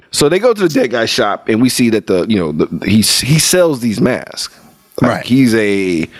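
Speech with gain pumping throughout: the gain swings roughly 25 dB, likely from excessive input gain driving a fast limiter, unlike a gate's hard cutoffs.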